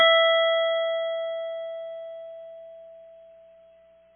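AAC compression runs through the whole of this music clip, from start to finish: nothing survives above about 3.7 kHz, so the top of the mix is gone and the sound is dull and heavily smeared. The likely cause is an AAC-LC encode at a very low rate. The damage is heavy, which fits a bitrate near 16 kbps, where the encoder drops the band limit and quantises the remaining frequency lines so coarsely that held tones warble and blur.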